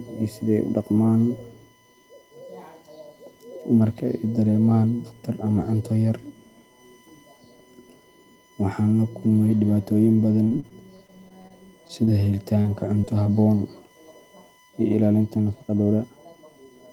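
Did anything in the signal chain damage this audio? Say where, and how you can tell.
Yes. A steady 1 kHz USB whine, about 35 dB below the speech, runs throughout. This is analogue wiring: the bus's 1 ms frame current is leaking through power or ground.

Choppy, robotic speech from 10.43 to 11.52 s, just after "la kulmay dhibaatooyin", and again from 11.88 to 12.66 s marks repeated packet loss on the network. Holes up to 28 ms were patched by extending earlier sound.

Brief smears at 13.02 to 13.05 s and 13.23 to 13.27 s are short concealed packet loss. Each roughly 20 ms hole was filled by continuing the preceding audio.

From 15.31 s to the end, speech runs about 1.49 times faster and rushed at unchanged pitch. This is likely a time-stretched section, with processing dropping short pieces.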